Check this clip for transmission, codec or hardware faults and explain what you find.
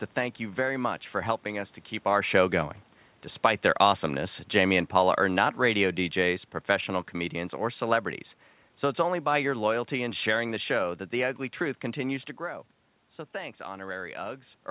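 One fault stands out, an automatic gain fall. The audio has passed through a narrowband call path, with nothing above 4 kHz, which fits G.711 A-law at 64 kbps.

From 4.49 to 6.93 s, starting just after "their awesomeness" and ending before "comedians or celebrities", the automatic gain falling brings the level down by about 4 dB. The gain control judged the input too hot or its background noise too strong and eased its gain back over those two and a half seconds. What separates it from a talker leaning away is that the room noise sinks by the same amount as the speech.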